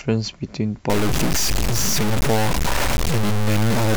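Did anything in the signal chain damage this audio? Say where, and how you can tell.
Yes. From 0.90 s to the end, the speech turns harsh and grainy, with low bit depth without dither. The distortion tracks the speech, swelling and changing with it. Quiet stretches sputter or fall silent. The error is roughly as loud as the speech itself, which points to only 3 bits. The likely cause is a sample-format conversion stage that truncated the samples without adding dither.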